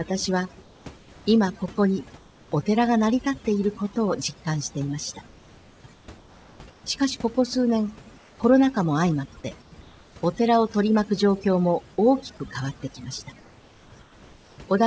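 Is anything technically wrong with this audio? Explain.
Yes, there are two faults in this speech recording.

Overdone noise removal runs through the whole clip. A noise reducer set too aggressively has pushed individual frequency bands far down whenever they sat near its noise estimate, taking the quieter parts of the voice with them. The background in the gaps drops and breaks up into twinkling specks. On a spectrogram, the pauses show isolated bright dots on a dark field, and the speech has ragged, holed edges.

Comfort noise in place of the background appears in the pauses at 0.62–1.26, 2.18–2.52, 5.94–6.84, 8.18–8.40, 9.62–10.16 and 13.40–14.58 s. The longest stretch lasts about 1.08 s. The likely cause is the sender halting transmission when no speech was detected, with the receiver filling the silence with synthetic noise. Each gap holds a smooth, featureless hiss, about 3 dB quieter in the 2.18 s and 8.18 s gaps. 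On a spectrogram these show as even grey blocks with abrupt edges. The waveform holds a flat, uniform noise band.

The sound also stops at 8 kHz, which fits a wideband call codec such as G.722.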